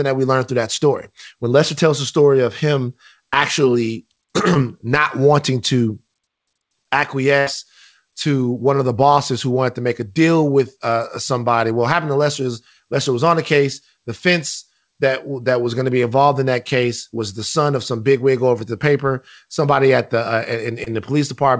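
At 4.54 to 4.57 s a short concealed packet loss occurs: about 20 ms of the call never reached the decoder, and the receiver covered 12 ms by extending the preceding sound before blending back. It is heard as a brief smear, and on a spectrogram it shows as a thin smudge.

At 7.39 to 7.48 s comes a burst of packet loss. About 80 ms went missing and 73 ms were filled with a continuation that fades as it goes, so the held last sound gives way to resumed speech further on. The waveform shows a decaying, overly regular stretch, and the spectrogram shows flat, smeared bands.

At 20.84 to 20.88 s, just after "at the uh", a second short concealed packet loss fills 18 ms of a 20 ms gap. It causes a brief wobble and appears as a narrow blurred column on the spectrogram. Throughout, nothing appears above 8 kHz, the band limit of the call codec.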